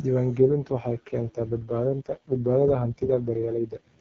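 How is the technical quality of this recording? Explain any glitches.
The recording has one glitch: an AMR rate drop from 0.38 s to 4.0 s leaves the speech rough and raspy for nearly the whole clip. At the start, the AMR wideband (HD Voice) codec sounds clean, consistent with 23.85 kbit/s. A weak link then forces it down to what sounds like 6.6 kbit/s. The bandwidth and continuity remain intact. A spectrogram would keep its 7 kHz ceiling with no gaps, but the harmonics would blur into noisy texture.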